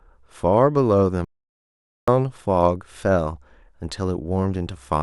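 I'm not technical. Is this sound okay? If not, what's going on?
No. There's an audio dropout to silence from 1.25 to 2.08 s: the speech cuts to total silence, with no background hiss, unlike a natural pause, likely from a lost input connection.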